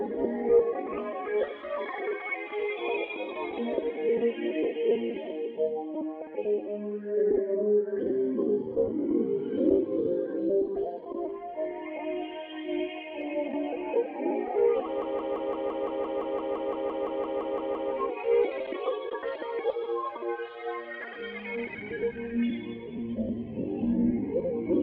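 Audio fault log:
15.02–17.92 s: system hang loop, a 170.67 ms slice of the ring buffer replays 17 times at 5.86 Hz, a machine-gun stutter fitting an 8192-sample buffer.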